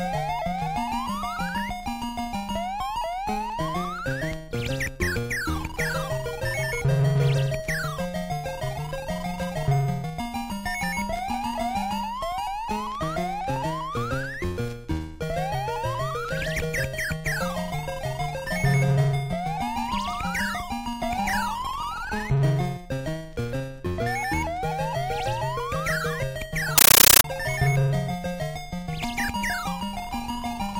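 Compressed stream played as audio, from 26.78 to 27.24 s: an AC-3 (Dolby Digital) bitstream, which is a 640 kbps stream, is treated as ordinary samples and not decoded. Each frame becomes a 13.3 ms noise burst, repeating 31.25 times a second as loud, chattering static.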